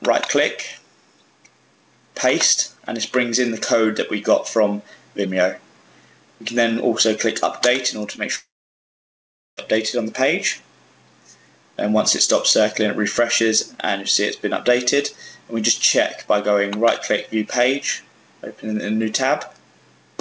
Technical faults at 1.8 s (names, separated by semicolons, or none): gain pumping